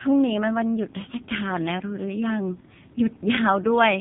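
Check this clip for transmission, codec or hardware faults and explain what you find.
The speech has one fault running through the whole clip: AMR narrowband mobile codec damage, and it is heavy. Nothing reaches above 4 kHz, so consonants lose their edge and the voice sounds muffled and telephone-like. The codec rebuilds speech from a vocal-tract model excited by a handful of pulses per 5 ms subframe. With very few bits for that excitation, the voice comes out buzzy and synthetic, which fits one of the lowest AMR-NB modes, around 5.9 kbps.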